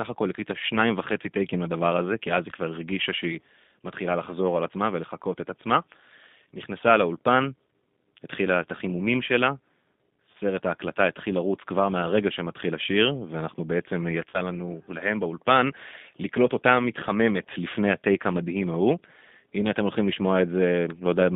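G.729 coding runs through the whole clip. The speech is confined to a telephone band of roughly 150 Hz to 3.6 kHz, and it sounds rough and slightly synthetic, consistent with an 8 kbit/s codec that rebuilds each frame from a vocal-tract filter and a few pulses.

VoIP packet loss concealed by the speech codec occurs at 10.32 to 10.35 s, where about 20 ms of audio went missing. The decoder filled the gap by extending its last pitch and filter with falling gain, stretching the sound into a brief tone or coloured noise that fades.

The same concealment returns at 14.30 to 14.41 s, this time covering about 40 ms of loss, which fits two consecutive packets. Because each frame builds on the one before, the speech stays weak and distorted for a short while after packets arrive again.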